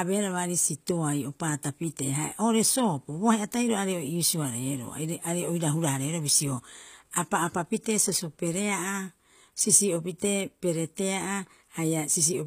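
Speech throughout with plainly audible HE-AAC compression damage. The treble up to a cutoff near 15.5 kHz sounds copied rather than recorded, giving gritty, metallic s sounds. Unlike a plain low-pass, brightness remains. This likely comes from HE-AAC v2 at a low bitrate around 24 kbps.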